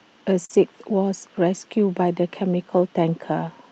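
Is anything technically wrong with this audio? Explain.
Yes, there are two closely overlapping network faults early in the clip, both on a call-style path that, judging by its coding texture and the band reaching up to about 8 kHz, fits an Opus link.

From 0.45 to 0.51 s there is a brief smear with a wobble, where the sound seems to stretch rather than move on before blending back. This is short concealed packet loss: roughly 40 ms of audio never arrived in time, so the decoder invented about 38 ms by extending the preceding sound and then crossfaded into the real signal. Any short consonant in that span may be lost.

Overlapping it, from 0.49 to 0.55 s, the texture turns grainier and noisier for about 40 ms without any gap. This is a lost packet rebuilt from error correction. Two packets went missing, but each following packet carried a coarse, low-bitrate copy of its predecessor, and the decoder played those copies instead. 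The rebuilt stretch keeps the timing intact but lacks fine detail, which is why it sounds rougher than the surrounding audio.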